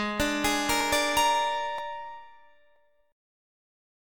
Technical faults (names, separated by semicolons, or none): audio missing between chunks